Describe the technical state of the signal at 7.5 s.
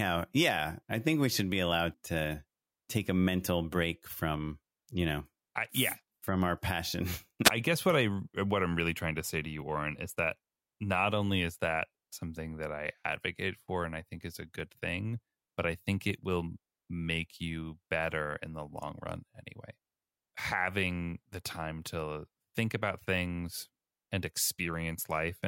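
A wireless microphone squelch dropout runs from 7.44 to 7.51 s, between "yeah from our passion" and "I guess what I". The radio link fades, hiss rises, and the receiver's squelch mutes the output for 8.4 ms before the speech returns.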